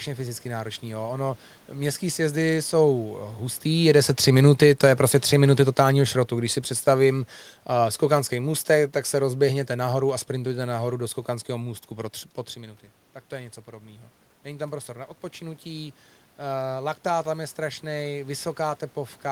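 Speech that sinks slowly, background and all, from 3.65 s to 10.17 s, losing about 8 dB over those six and a half seconds. This is automatic gain falling: the talker's shift in position around 3.5 s made the input louder, and the automatic gain control answered by easing its gain down step by step. Because the gain acts on the whole signal, the room noise fades right along with the voice. The second fault runs the other way. Around 12.5 s the talker moves again and the input drops by about 13 dB. Then, from 12.53 s to 16.02 s, voice and room noise swell together by about 4 dB over roughly three and a half seconds. That is automatic gain rising, with the control slowly lifting its gain to make up for the quieter input, and recovering only part of the 13 dB drop.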